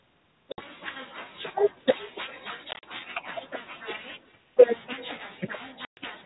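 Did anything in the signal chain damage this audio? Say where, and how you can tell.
Yes. At the far end, echo with no canceller lets the loudspeaker feed its microphone, so the speech returns throughout as a faint, thinner copy about 27 dB down, roughly 0.4 s late.

On the network, packet loss on an ADPCM call cuts hard silent holes at 0.52–0.62 s (60 ms), 2.71–2.84 s (80 ms in bursts up to 40 ms), and 5.85–5.99 s (120 ms). Speech resumes slightly distorted while the decoder's predictor resyncs.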